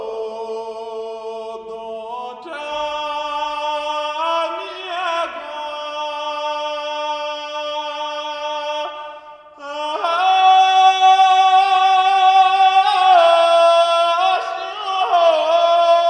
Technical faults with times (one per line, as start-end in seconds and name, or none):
0.00-16.10 wrong sample rate